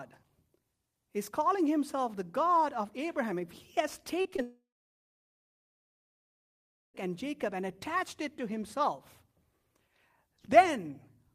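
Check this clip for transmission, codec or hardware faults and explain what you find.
Yes, there's a clear transmission problem in the speech, clustered just past the four-second mark.

Short concealed packet loss hits three times in quick succession: 4.21 to 4.27 s, 4.31 to 4.34 s, and 4.36 to 4.40 s, with 20 to 40 ms of audio missing each time. The decoder didn't get those packets in time, so it stretched the preceding sound to cover the gaps before blending back in. You hear a brief smeary wobble rather than clean speech.

Right after that, from 4.42 to 6.96 s, about 2.5 s of audio simply isn't there. For the first couple of tenths of a second the last sound is carried on as a buzzy, hissy tail that fades out, and then there are about 2.3 s of silence before the speech picks up again further on, with that stretch lost. That points to a long network dropout as the likely cause.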